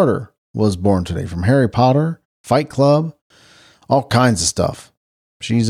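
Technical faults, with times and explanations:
Nothing stood out on listening to the speech in this recording.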